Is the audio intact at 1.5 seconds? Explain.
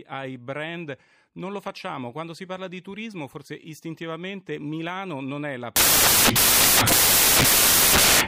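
Yes, at 1.5 seconds the speech plays through cleanly with no dropout, click, distortion or other fault.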